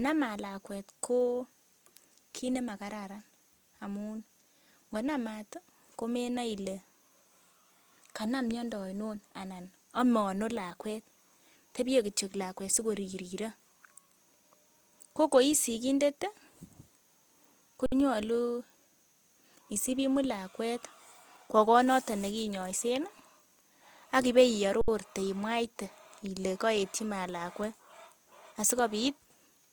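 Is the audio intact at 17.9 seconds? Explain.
No. From 17.86 to 17.92 s there's an underrun with held sample: the output buffer ran dry for about 60 ms and the converter just held its last value. The speech freezes into a flat, silent stretch with barely a click, and since nothing seems to be lost, it picks up right where it stopped.

Through that moment and the whole clip you also get plainly audible damage that likely comes from Opus compression in its CELT music mode. Band energy is kept but filled in roughly, so the speech sounds grainy and rough instead of swirly. That fits a low rate of around 24 kbps, even though the bandwidth still reaches about 20.3 kHz.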